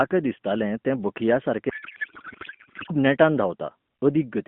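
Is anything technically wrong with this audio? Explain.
Yes. A codec payload misread runs from 1.70 to 2.93 s: AMR frames packed octet-aligned are being unpacked as bandwidth-efficient, so the bit fields shift and the speech becomes garbled noise and warble, through an AMR narrowband link limited to about 150 Hz to 3.4 kHz.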